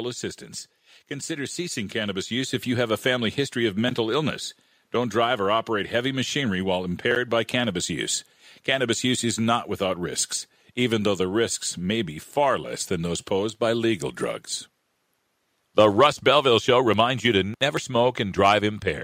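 From 1.26 to 3.03 s, automatic gain rising lifts level by about 6 dB; voice and background swell together, unlike a speaker moving closer.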